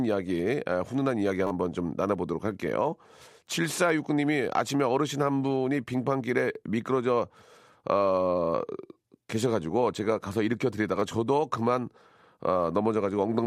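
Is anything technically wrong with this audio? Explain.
Yes. At 1.47 to 1.51 s, 8.93 to 8.95 s and 11.0 to 11.02 s, fresh audio reached the output late, so it replayed its last block: repeated buffer. Each tiny slice, consistent with a 10 ms buffer, loops with hard joins, heard as a brief buzzy stutter, longest at 1.47 s.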